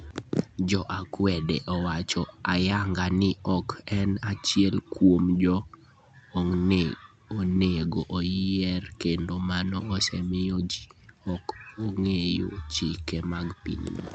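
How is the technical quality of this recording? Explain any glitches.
Nothing here counts as a glitch: the speech comes across steady and unbroken, with the top end tapering off around 8 kHz, just as you'd expect from a call carried over Opus at 64 kbps with its bandwidth set to 8 kHz.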